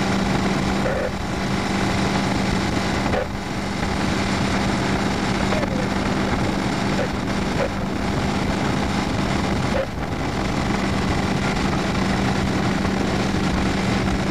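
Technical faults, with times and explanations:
No technical faults detected anywhere in the audio.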